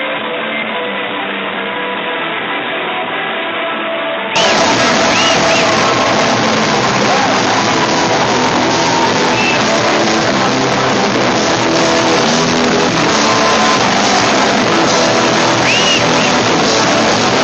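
For the first 4.36 s the sound is dull and boxy, with nothing above 3.8 kHz, a separate background noise roughly 35 dB below the signal, and a level about 10 dB lower than what follows. At 4.36 s it clears with no gap. This points to an input switched to a poorer device, likely a narrower-band microphone or a headset call profile. A codec band limit would not carry its own noise floor and level step, and after the change the call path reaches up to about 8 kHz.

From 4.91 to 6.12 s the audio runs about 12% fast, hurried but at unchanged pitch. That is a jitter buffer speed-up. The receiver held more audio than it wanted and cut many short pitch-period-sized pieces, roughly 150 ms in all, to catch up. A sample-rate mismatch or a resampling error would raise the pitch along with the speed, but here only the timing tightens and the tone stays where it was.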